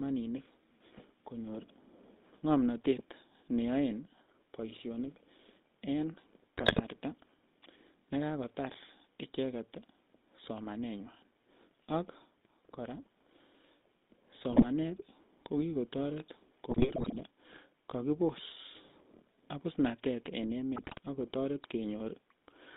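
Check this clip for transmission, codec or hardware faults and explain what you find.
Two faults are present: the whole clip has passed through a GSM full-rate codec, and four short bursts of GSM bit errors break through.

GSM full-rate codec, throughout: The speech sits in a band of roughly 200 Hz to 3.7 kHz, with a plainly audible buzzy, gravelly grain. That grain comes from rebuilding each voice from a vocal-tract filter driven by a sparse, regularly spaced pulse train, at a quality that fits the 13 kbps full-rate coder. On a spectrogram, energy stops sharply near 3.7 kHz, and the harmonics look smeared and coarse.

GSM bit errors, at 6.58 to 6.81 s, 14.50 to 14.67 s, 16.70 to 17.20 s, and 20.76 to 20.99 s (the last just after "abusnatet en"): Corrupted filter, pitch or gain values reached the decoder, so individual frames came out with a wrong spectral shape or level. The sound breaks into squawks, pops and gargling, longest at 16.70 s. 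The waveform shows sudden level jumps in those spans, and the spectrogram shows blotchy, displaced energy there.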